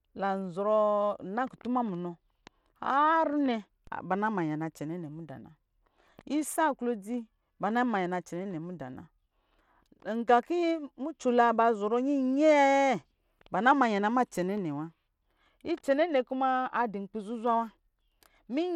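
From the start the speech carries plainly audible gritty treble and aliasing, likely from Bluetooth SBC compression at a starved bit pool, around 96 kbps. Coarsely quantised upper sub-bands flicker in and out, and a spectrogram shows patchy high bands with nothing above 17.3 kHz.

At 3.87 s a DC step shifts the waveform's zero line abruptly, heard as a low thump under the continuing speech. The waveform shows the whole trace jumping off centre, then sliding back as the offset decays through a high-pass filter near 20 Hz.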